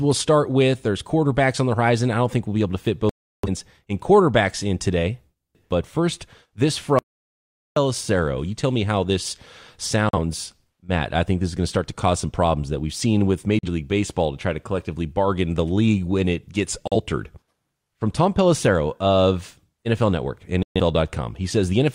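At 3.09 to 3.48 s the speech mutes for about 0.34 s. This is a digital broadcast dropout. The receiver stopped getting usable frames and held silence until valid ones arrived again. The length fits about eight lost frames of roughly 43 ms each, and everything sent in that span is missing.

From 6.99 to 7.76 s there is an audio dropout to silence lasting about 0.78 s. The speech cuts off mid-flow and returns the same way. The gap is silent with no room tone underneath. The likely cause is the input being lost upstream, through a failed link or a mute, while recording continued.

The digital broadcast dropout returns at 10.09 to 10.19 s, 13.59 to 13.69 s and 16.88 to 16.96 s. Each is a brief hole of about 43 ms, consistent with a single dropped frame. A final one at 20.63 to 20.80 s lasts about 0.13 s, which points to three consecutive frames lost.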